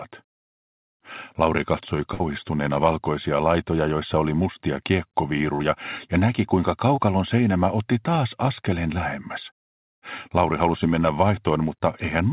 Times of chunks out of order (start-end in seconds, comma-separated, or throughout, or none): none